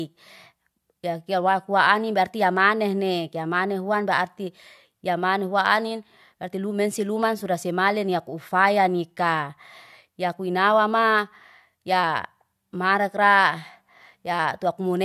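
No technical faults can be heard anywhere in the speech recording; the signal stays steady and intact throughout.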